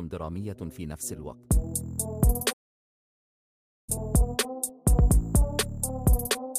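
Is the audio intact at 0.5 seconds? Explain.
Yes, at 0.5 seconds the audio is intact, with no fault audible at that moment.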